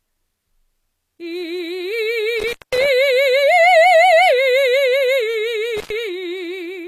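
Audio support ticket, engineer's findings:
Gritty, metallic treble throughout; top end sounds synthetic. Nothing above 14.9 kHz. Likely HE-AAC compression at a low bitrate, roughly 24 kbps. Mechanism: upper band rebuilt by spectral band replication, so lower bands are copied upward under a coarse envelope, and harmonics misalign across the crossover. Spectrogram: hard ceiling at 14.9 kHz, upper region showing repeated, blocky patches that mirror lower-band structure instead of continuous harmonics. Waveform unremarkable.

Dropout 2.40–2.86 s, music cutting out for about 197 ms with crackle at both edges, faint hiss during the gap. Probable component: loose cable or plug, intermittent contact. Second event 5.77–5.90 s, open about 99 ms, same signature. Mechanism: connection briefly opens, signal drops to residual noise floor. Waveform: abrupt collapse to near-flat line, spiky transients at entry and exit. 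Spectrogram: vertical broadband clicks bracketing a dark, low-level noise band.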